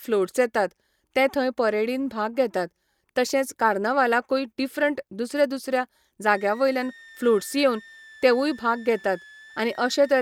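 Speech, with a switching supply whistle from 6.26 s to the end at 10.22 s: a thin high tone, roughly 25 dB below the speech, wandering between 1.69 and 1.92 kHz as a power supply's burst mode shifts under load. That drifting pitch separates it from a fixed interference tone.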